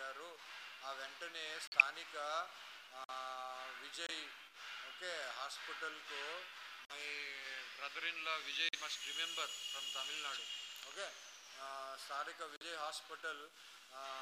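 At 1.67 s the sound drops out abruptly for about 0.13 s. This is a corrupt frame muted. Damaged compressed frames were rejected by the decoder, and silence was played in their place. Shorter holes of about 0.05 to 0.07 s follow at 3.04, 4.07, 6.85, 8.69 and 12.56 s. Each starts suddenly and resumes on time. The short gaps point to roughly two lost frames each, the first to several.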